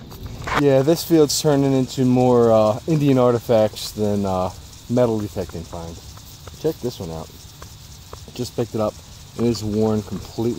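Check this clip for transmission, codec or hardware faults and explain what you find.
No transmission, codec or hardware faults can be heard.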